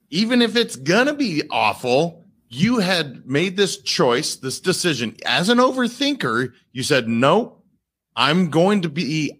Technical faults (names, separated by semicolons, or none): none